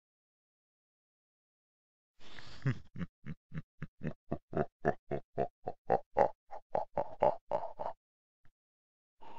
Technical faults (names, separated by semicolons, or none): none